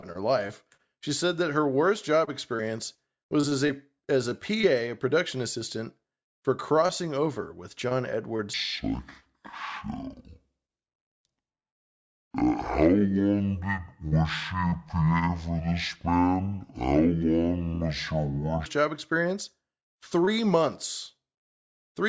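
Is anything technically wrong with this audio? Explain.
Yes. From 8.54 s to 18.66 s, just before "job experience", the speech drops a full octave and runs at half speed, sounding low and dragging. This is a wrong sample rate: samples played without conversion at half their recorded rate, which fits 32 kHz audio played at 16 kHz.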